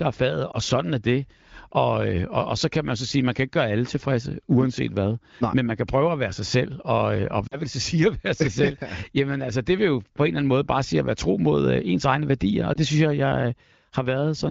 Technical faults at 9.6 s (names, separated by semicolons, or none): none